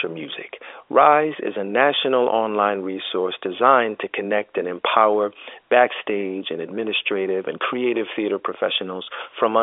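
No technical faults occur anywhere in this speech, which carries the narrow band of an ordinary G.711 telephone line with nothing above about 3.7 kHz.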